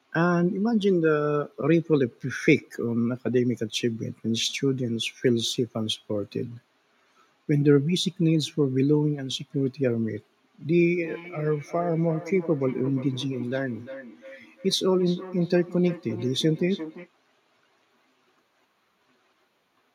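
From 10.98 to 17.1 s there is feedback echo between two devices. A second device on the call replays this microphone's signal, which is picked up again. The speech returns about every third of a second, thinner and ringing, at about 15 dB below the speech.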